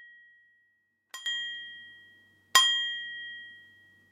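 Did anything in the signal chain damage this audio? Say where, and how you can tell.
Yes. At 1.26 s, sound and background noise leap about 19 dB in one instant: a sudden gain jump, likely an unramped digital gain change, not a gliding AGC.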